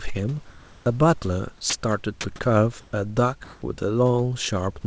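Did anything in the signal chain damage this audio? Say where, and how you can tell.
Yes. In the call processing stage, discontinuous transmission likely stopped sending during pauses. The real room background, about 27 to 29 dB below the loud parts, is swapped for flat synthetic comfort noise at 0.50–0.86 s, 2.81–2.93 s and 3.44–3.62 s, with the level shifting by about 1, 5 and 4 dB.

The same voice detector likely treated 30 ms of sound at 1.70–1.73 s as background and halted transmission. The receiver filled the gap with comfort noise, so a brief piece of sound drops out and gives way to steady noise before the detector triggers again.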